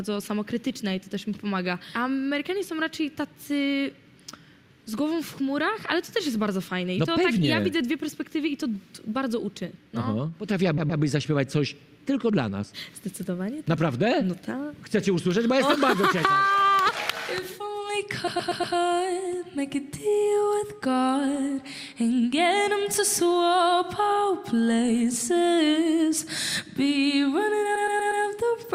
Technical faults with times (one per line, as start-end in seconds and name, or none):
10.77-11.01 repeated frames
18.27-18.75 repeated frames
27.75-28.23 repeated frames